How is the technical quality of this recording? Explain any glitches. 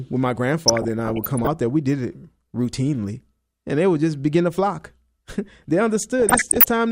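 The speech is marred by DAB burbling twice: from 0.68 to 1.47 s, between "when my" and "there we did it", and from 6.2 to 6.7 s. Weak reception lets bit errors through to the MP2 data, corrupting sub-band samples and scale factors, which fits error rates around 0.5 and 0.7 percent. It sounds like short blips of noise. A spectrogram shows flickering blocks in isolated frequency bands, frame by frame.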